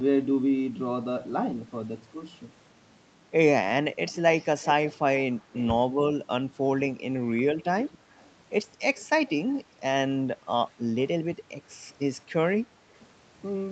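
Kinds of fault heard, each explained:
Echo leak: a far-end echo canceller likely passed its loudspeaker pickup back, so a copy of the speech trails 225 ms late, about 15 to 30 dB down.
Speech suppressed in double talk: with both sides talking, the echo canceller likely muted the talker too, briefly cutting the speech about 25 dB near 7.3 s.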